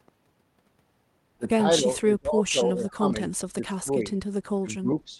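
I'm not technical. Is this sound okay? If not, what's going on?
No. The speech repeatedly sinks or breaks up from 1.79 to 3.11 s, 3.53 to 4.04 s and 4.61 to 4.89 s, with a slight dip at 5.06 to 5.18 s. This is likely speech suppressed in double talk: both sides spoke at once, and the echo canceller turned this voice down along with the echo.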